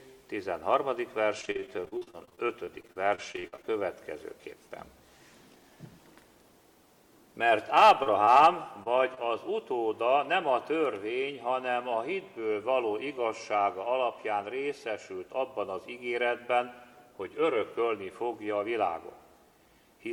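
From 1.41 to 3.80 s there is repeated packet loss, giving a robotic sound. More than two dozen short holes follow close on each other. The longest lasts 47 ms. Each one is filled by stretching the sound that came just before it. About 520 ms of real audio is missing, and 614 ms of patched sound takes its place. That covers roughly a quarter of the stretch. The result is choppy, with pieces absent.

At 5.35 to 5.71 s comes a jitter buffer speed-up. Too much audio had built up waiting for playback. To cut the delay, the receiver dropped tiny slices a pitch period or so long, again and again. About 40 ms is removed in total. The audio runs at 109% speed while the pitch stays put. It sounds briefly hurried.

From 7.81 to 9.18 s there are scattered short gaps. About seven isolated losses are spread across this span. None lasts much beyond 30 ms. Each hole is patched by carrying the previous sound forward. 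Around 80 ms of real audio is gone, and only a small share of the stretch is concealed. The sound stays clear between the gaps, which come through as brief ticks, small smears or hiccups.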